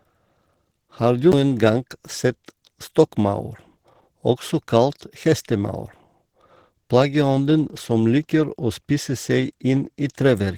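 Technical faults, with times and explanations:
throughout: Opus compression. The speech was likely squeezed through a low-rate Opus encoder in its hybrid speech mode, which fits about 16 kbps; starved of bits, it rebuilds bands coarsely, so the speech sounds hoarse and grainy, with content reaching about 20.3 kHz.
1.32 s: CD skip. The laser jumped to another turn of the disc's spiral, so playback muted for around 10 ms and resumed elsewhere, heard as a tick and an abrupt jump right before "gang sett".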